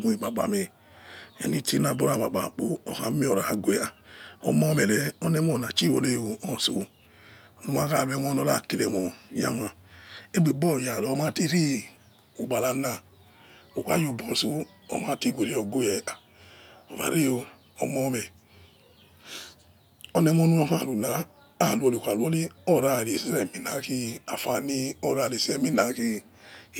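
Listening closely, nothing in the recording stood out as a technical problem.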